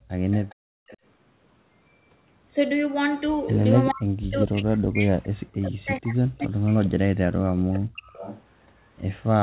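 From 0.00 to 0.09 s, the background is gated by the echo canceller. The room sound drops by about 32 dB while the far end plays.

At 0.31 to 0.55 s comes an echo leak: a faint copy of the speech returns 413 ms late, about 20 dB down. The likely cause is a canceller missing its loudspeaker pickup.

From 0.55 to 0.87 s the background gates again, dipping about 33 dB. The echo leak recurs at 0.87 to 0.97 s, about 25 dB down.

From 3.91 to 7.03 s, speech is suppressed in double talk. With both sides talking, the canceller ducks the talker by around 40 dB, likely mistaking it for echo.

The echo leak returns at 7.72 to 7.79 s, about 15 dB down. A brief double-talk dip follows at 7.94 to 8.03 s, then another leak at 8.05 to 8.43 s.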